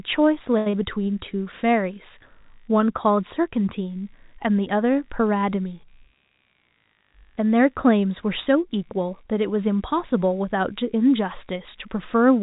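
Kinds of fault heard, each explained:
Computer activity noise: A low buzz sits under the speech for the whole clip, pulsing at around 70 times a second and about 45 dB below the speech. It comes from the computer's changing load disturbing the audio circuit's shared ground. It follows the machine, not the speech.
Short stall from a late packet: At 0.58 s a packet arrived late and the jitter buffer ran dry. The receiver held the last sound for 79 ms until it came. Nothing is lost, but the sound drags briefly with a slight buzz or dip.
Short concealed packet loss: From 0.70 to 0.74 s, 50 ms of audio never arrived in time. The receiver filled 30 ms by extending the preceding sound, then blended back. It is heard as a brief smear, and some of the speech there is gone.
Jitter buffer speed-up: Between 6.30 and 6.78 s the receiver trimmed roughly 70 ms of excess buffered audio. It removed small pitch-period pieces repeatedly, so the speech runs at 113% speed at unchanged pitch. 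The passage sounds hurried. The narrow telephone band throughout fits a G.711 call path.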